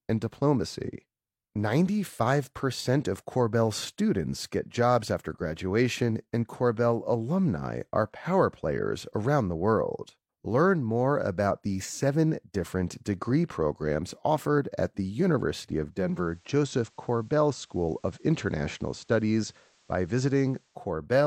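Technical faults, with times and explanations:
15.87–20.95 s, digital radio blending to analogue: the receiver lost the digital stream and cross-faded over about 0.48 s to the station's FM broadcast, returning to digital at 20.95 s. On the FM path a steady hiss sits roughly 40 dB below the speech, because FM reception carries its own noise floor, and the level drops by about 1 dB, as the FM broadcast is set at a slightly different level from the digital one.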